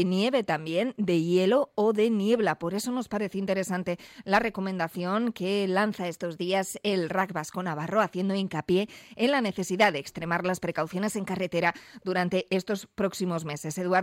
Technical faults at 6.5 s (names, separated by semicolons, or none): drift correction step